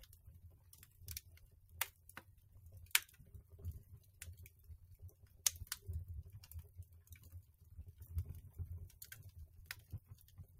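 From 0.52 to 0.71 s the sound briefly sags, losing about 5 dB, and from 4.02 to 4.17 s it dips again by about 4 dB, each time for roughly a fifth of a second or less. This is sound cut by the noise suppressor: the suppressor judged these stretches to be background noise and pulled their level down harder than the surrounding material, so sustained parts thin out and then recover.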